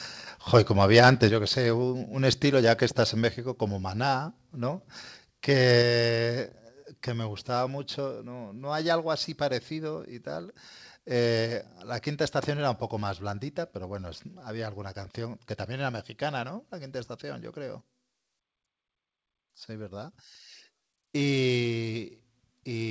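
From 0.96 to 1.08 s the speech shows microphone overload: the loudest peaks, driven roughly 5 dB past the converter's limit, have their tops sliced flat, giving a harsh, crackly edge. On the waveform a small share of samples show flattened tops, and the spectrogram shows a brief smear of broadband distortion, likely from an input volume set too high.

At 1.29 s, just after that distorted burst, the microphone volume is stepped down by about 6 dB, and again at 5.82 s by about 4 dB. Voice and background noise both drop together in one instant step. The waveform envelope shrinks abruptly and the spectrogram darkens evenly across all frequencies, likely the call software cutting the device's input gain. The spectrogram also shows no energy above 8 kHz, consistent with the G.722 call codec.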